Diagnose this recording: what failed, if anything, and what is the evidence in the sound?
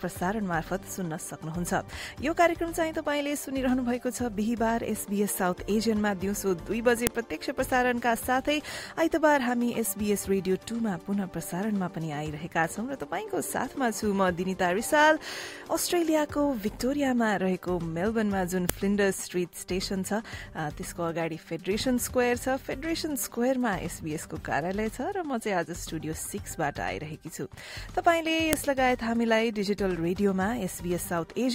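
The failure is at the storage stage: separate WAV pieces were joined end to end without their headers being stripped, so each header is played as a file header played as audio. The few dozen bytes of header data are decoded as sample values, giving a single sharp, loud click at 7.07 s, 18.70 s and 28.53 s. Each click marks where a new piece begins, and it cuts through the sound regardless of what the signal is doing.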